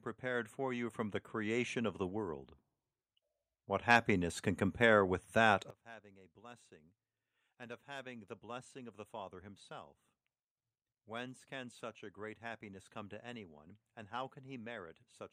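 A speech recording with automatic gain rising. The level swells from 0.2 to 2.48 s (about 9 dB) and from 7.47 to 9.5 s (about 6 dB), voice and background together.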